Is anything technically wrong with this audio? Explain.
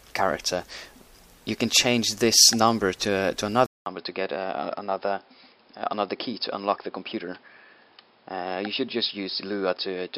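Yes. From 3.66 s to the end, after a 200 ms silence, the sound turns dull and boxy, with nothing above 5.2 kHz, a level a few dB lower and a new noise floor roughly 40 dB below the signal. This is likely an input switched to a poorer device with a narrower band.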